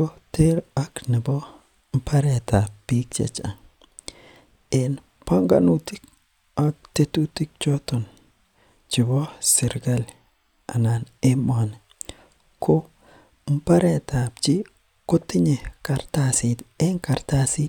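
No technical faults can be heard anywhere in the speech.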